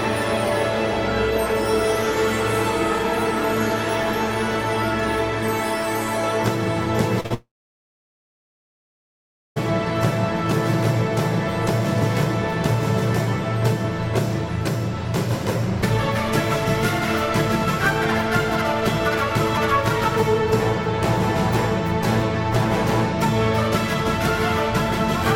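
Short concealed packet loss at 7.20 s and 7.26 s: two back-to-back gaps of about 40 ms each were patched by extending the preceding sound, leaving a brief smeared wobble. Long network dropout from 7.34 s to 9.58 s: a short fading continuation gives way to roughly two seconds of silence, likely from audio that never arrived, before sound resumes with that portion missing.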